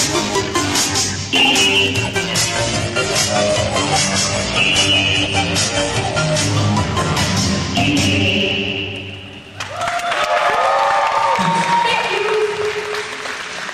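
From 2.41 s to 6.41 s the adaptive stream dropped to a lower bitrate: the connection slowed, so the player switched to a lower-quality version of the same audio for about four seconds. The sound changes abruptly with no gap, codec artefacts rise, and nothing remains above 12 kHz. That cut-off suggests a drop from roughly 96 kbit/s to roughly 32 kbit/s AAC. At 6.41 s the fuller version returns just as suddenly.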